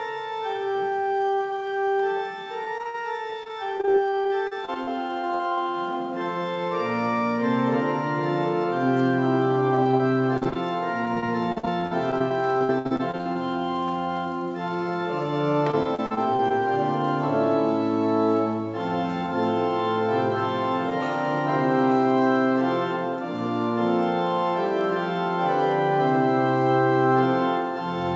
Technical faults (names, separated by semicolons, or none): dropped samples; repeated packet loss (robotic sound)